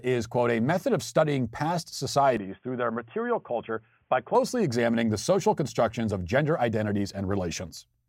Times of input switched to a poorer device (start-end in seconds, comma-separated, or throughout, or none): 2.37-4.35